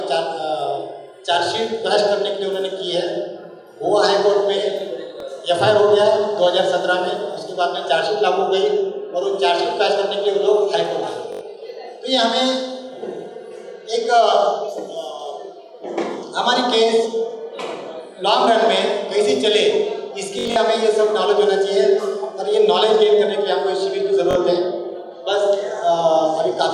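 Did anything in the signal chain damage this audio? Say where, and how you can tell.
Yes, at the wireless link: a Bluetooth stutter at 5.20–5.22, 11.33–11.41, 20.39–20.56 and 24.31–24.35 s. The receiver replays its last buffer while packets are missing, looping a slice of about 21 ms. At 5.20 s that slice repeats once. At 11.33 s and 24.31 s it runs into a buzz of about 85 ms and 43 ms. At 20.39 s the repeats are scattered across about 170 ms. A spectrogram shows a ladder of identical narrow columns, and the waveform shows copied cycles followed by a jump where the sound resumes further on.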